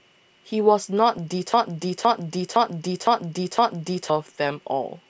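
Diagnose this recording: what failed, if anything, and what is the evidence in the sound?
Driver or buffer stage: a system hang loop. From 1.54 s to 4.10 s the same 512 ms chunk of speech repeats exactly, five times over, at about 1.95 Hz, so it comes across as a slow, mechanical stutter. That length fits an 8192-sample ring buffer, which the hardware kept replaying while the driver or host stalled and never refilled it. Whatever should have played there, roughly three seconds of audio, is simply gone.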